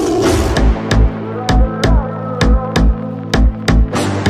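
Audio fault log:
Nothing stood out on listening.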